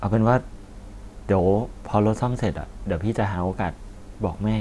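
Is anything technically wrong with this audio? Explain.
No, nothing technically wrong is audible anywhere in this speech recording.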